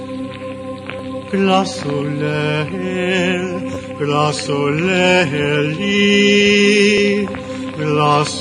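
Repeated buffers at 0.99 s, 3.74 to 3.77 s and 6.98 s: new audio arrived late, so a 10.67 ms block, which fits a 512-sample buffer, replays once (twice mid-clip) as a click. Waveforms show identical copies; spectrograms show thin vertical lines at the joins.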